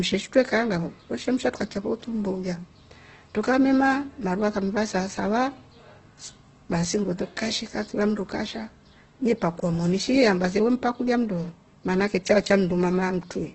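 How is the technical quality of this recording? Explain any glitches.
Not great. Heavy codec damage runs through the whole clip. From start to end the speech sounds grainy and rough, vowels carry a noisy fizz, and nothing comes through above 8.2 kHz. That's likely Opus compression in its music mode, starved at around 12 kbps. It keeps each band's energy but fills in the detail with copied lower bands or plain noise.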